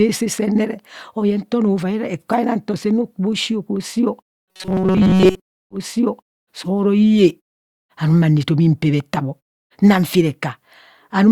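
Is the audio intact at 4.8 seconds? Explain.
No. From 4.26 to 5.40 s the speech turns into a rigid, metallic buzz at 188 Hz: robotic sound from repeated short buffers. New audio likely arrived too seldom, so a roughly 5.3 ms fragment was looped repeatedly and most of the real signal in that span was skipped.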